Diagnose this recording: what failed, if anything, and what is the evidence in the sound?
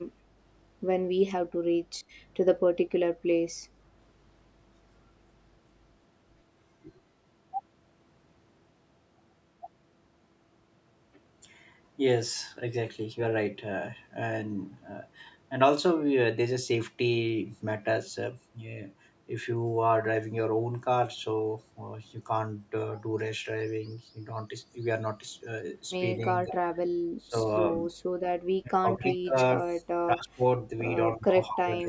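Speech suppressed in double talk at 2.97–3.01, 27.18–27.36, 27.9–28.04, 28.63–29.37, 30.06–30.43 and 31.17–31.9 s: speech dips by about 15 to 25 dB. This is likely the call processing's echo canceller ducking during overlap.

Echo leak at 26.48–26.54 s: a delayed copy trails the speech by 216 ms at about 10 dB down, likely loudspeaker pickup the canceller failed to remove.

Background gated by the echo canceller at 26.83–26.88 s: room sound drops by about 14 dB, then returns when the call processing releases its suppression.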